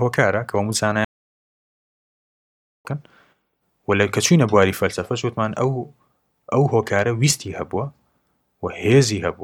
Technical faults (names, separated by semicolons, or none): playback stall